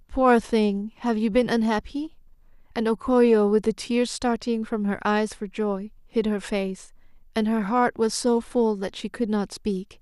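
No technical faults can be heard anywhere in the speech. There are no events to place on a timeline.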